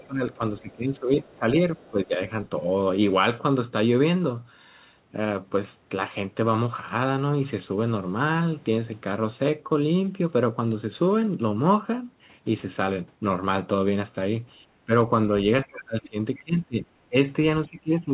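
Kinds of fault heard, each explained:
Other side's voice leaking through: a faint second voice, about 25 to 30 dB below the talker, near 1.3 s and 16 s, likely residual loudspeaker echo.
Speech suppressed in double talk: the talker dips by up to about 20 dB in the opening and closing seconds, likely the echo canceller attenuating both sides during overlap.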